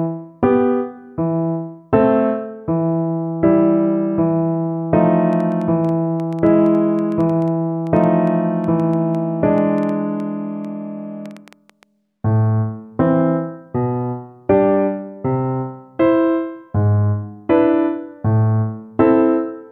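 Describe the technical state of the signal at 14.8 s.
At 14.8 s the signal is intact, with no dropout, clipping, glitch or other audible fault at that moment.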